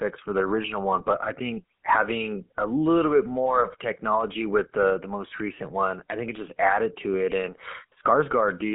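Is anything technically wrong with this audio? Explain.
Yes, there are two faults. Throughout, the speech has passed through a GSM full-rate codec, whose coarse coding is plainly audible and fits a 13 kbps full-rate coder. The coder models the throat and mouth as a filter and excites it with sparse, evenly spaced pulses, discarding most of the excitation detail. The channel runs only from about 250 Hz to 3.4 kHz, so the voice sounds thin, muffled and buzzy, with a gravelly roughness.

From 0.99 to 1.05 s there are GSM bit errors: corrupted bits reached the decoder, scrambling its filter, pitch and gain parameters for a few frames, which suggests a bit error rate around 1.5 percent. For that brief stretch the decoder rebuilds the wrong spectrum and level, so the voice breaks into a short squawk and gargling burst before the coding settles again.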